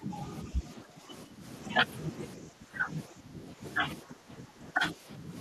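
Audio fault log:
0.00–0.16, 0.44–1.44, 2.37–2.89, 3.07–3.63 and 4.02–5.35 s, speech suppressed in double talk: the echo canceller likely could not tell the near talker from loudspeaker echo while both sides spoke, so it turned the microphone signal down as though it were echo. Across most of each span the speech sinks by up to about 10 dB, ducking and thinning in pieces rather than as a steady fade, and the suppression in the last span totals roughly a second.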